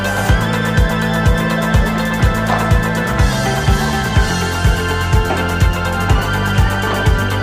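Nothing technically wrong can be heard anywhere in this audio. No part of it points to a problem in how it was captured or played back.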